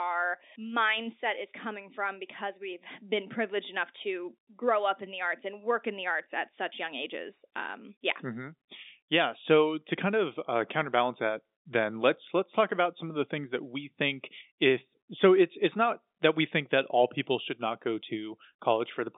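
No faults present: the speech sits in a normal G.711 mu-law telephone path at 64 kbps, passing roughly 200 Hz to 3.7 kHz with nothing above 3.8 kHz, and the codec's quantisation noise stays faint.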